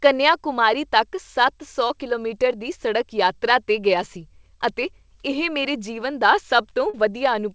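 Short concealed packet loss at 1.88 to 1.92 s and 6.90 to 6.95 s: about 20 ms, then 40 ms, of audio arrived too late, and the decoder extended the preceding sound, leaving a brief smear.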